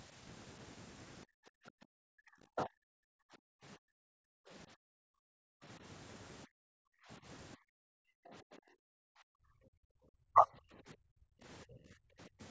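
In this speech recording, the room sound behind the talker repeatedly sinks away and comes back, dropping by about 40 dB at its deepest (about 37 dB and 34 dB in the last two dips) from 1.26 to 1.87 s, 2.98 to 5.63 s, 6.46 to 10.05 s, 10.75 to 11.38 s and 12.07 to 12.4 s. This is background gated by the echo canceller: while the far end's audio played through the loudspeaker, the canceller clamped the microphone down hard and released it only when that playback stopped, taking the ambience with it. The talker's own voice also ducks in three short bursts: a deep cut from 2.15 to 2.7 s and two shallower dips of roughly 25 dB, one from 10.33 to 10.47 s and another from 11.66 to 11.79 s. These are likely speech suppressed in double talk, with both ends speaking at once so the canceller could not tell the local voice from loudspeaker echo and pulled down everything. The call's microphone processing, which leaves nothing above 8 kHz, is working as expected.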